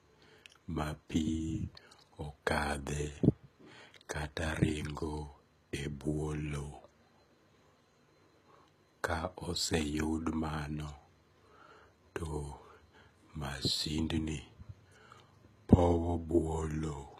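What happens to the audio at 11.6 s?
At 11.6 s, as throughout the clip, the speech carries plainly audible HE-AAC compression damage, likely from a low bitrate near 20 kbps. The treble is rebuilt from copied lower bands, so sibilants sound gritty and metallic. A spectrogram shows smeared, repeated-looking upper bands ending at 14.9 kHz.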